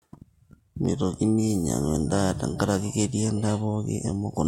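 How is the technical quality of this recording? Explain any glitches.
One glitch stands out, a brief click at 0.85 s in the speech. The likely cause is dropped samples: a tiny stretch of the stream, a fraction of a millisecond, went missing, so the waveform leaps straight from one value to a later one instead of moving smoothly between them. The gap is far too short to take away any audible sound. What you hear is a single sharp tick, which shows in a spectrogram as a thin vertical line across all frequencies.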